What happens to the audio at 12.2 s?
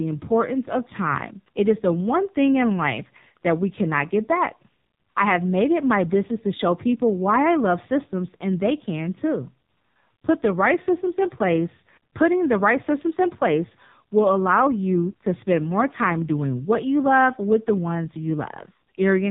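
As throughout, the speech at 12.2 s sounds muffled and buzzily synthetic. The AMR narrowband mobile codec cuts everything above 4 kHz and rebuilds speech from sparse pulses, fitting a rate near 5.9 kbps.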